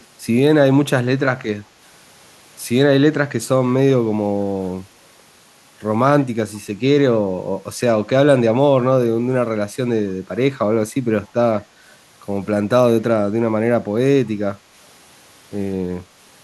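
From 0 to 0.06 s there is an echo leak: a very faint, delayed copy of the speech trailing the original by 154 ms. The likely cause is a far-end loudspeaker whose echo canceller left a trace of its own microphone pickup, which was then returned down the line. What separates it from room reverberation is that the copy arrives as one distinct repeat at a fixed lag, not as a smooth, smeared decay.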